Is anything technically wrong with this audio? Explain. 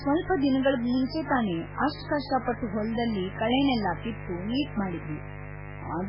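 Yes, two faults run through the whole speech clip.

Mains buzz: switching spikes from the 50 Hz supply get into the signal path twice per cycle, so harmonics of 50 Hz spread well up the spectrum. The result is a steady, raspy buzz, fairly loud and not far below the speech.

MP3 compression is the likely cause of the second fault, with damage that suggests a very low bitrate. With few bits available, the encoder removes everything above 5.2 kHz and drops weak frequency components that flicker between frames, so the speech sounds dull, watery and swirly, with smeared consonant onsets.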